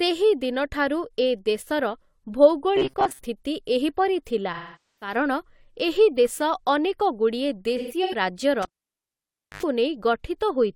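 Robotic sound from repeated short buffers affects this speech recording from 2.76 to 3.25 s. New audio appears to have arrived too slowly, so the playback path kept looping a short stretch of old signal while real material went missing, with roughly half of the passage made of repeats. The loop imposes a steady 133 Hz metallic buzz over the voice, which fits a buffer of about 7.5 ms. That points to a likely buffer underrun as the cause.

AAC frame loss with concealment appears twice. From 4.53 to 5.15 s, about 470 ms of coded audio is gone, consistent with a run of around eleven frames. The decoder rebuilds the gap from the last good spectrum, so the passage turns smeared and noisy and then sinks toward silence before the signal fades back in. From 7.77 to 8.15 s, about 213 ms is lost in scattered pieces across 341 ms, with the longest run around 150 ms. This gives shorter phasey, washed-out patches.

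Cable pulled and plugged in occurs from 8.62 to 9.63 s. A pop marks the disconnection, followed by near silence for about 955 ms. An 86 ms burst of 50 Hz mains buzz follows as the plug tip makes partial contact, and a second pop sounds when the connection is restored.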